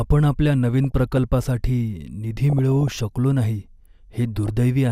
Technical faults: DAB burbling

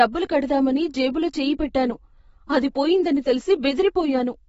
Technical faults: AAC compression

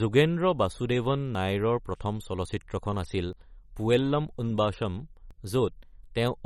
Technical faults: MP3 compression; audio missing between chunks

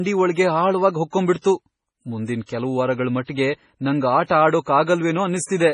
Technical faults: MP3 compression; pre-echo

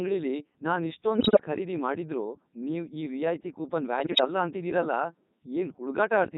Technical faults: Codec 2 vocoder; bit errors on digital voice radio

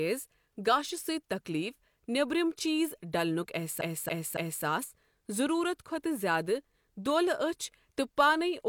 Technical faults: repeated frames

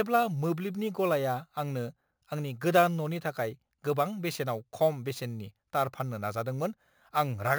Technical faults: imaging from sample-and-hold upsampling

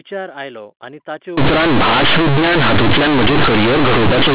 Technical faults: companded audio read as linear

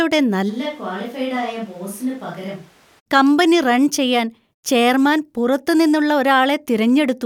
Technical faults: switch to a distant microphone

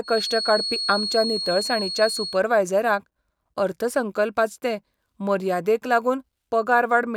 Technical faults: feedback whistle

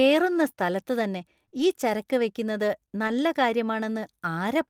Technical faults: short concealed packet loss; lost packet rebuilt from error correction

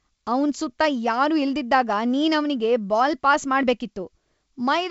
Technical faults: none

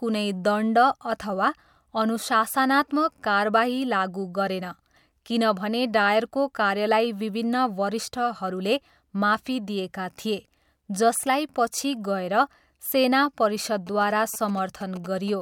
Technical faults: GSM signalling bursts

